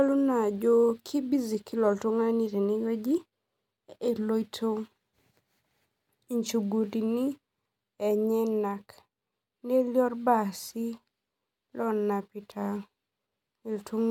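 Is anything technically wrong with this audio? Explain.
No, nothing is technically wrong with this audio.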